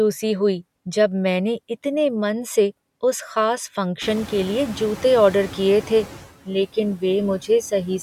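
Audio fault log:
throughout noise suppressor artifacts. The suppressor lowers the bands it judges to be steady noise, frame by frame, by about 16 dB. The background sinks in the gaps and comes back up under the speech. This includes the room noise, which jumps about 22 dB around 4 s.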